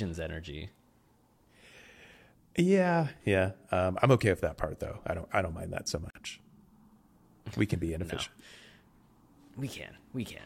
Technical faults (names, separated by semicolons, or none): gap at a join of encoded pieces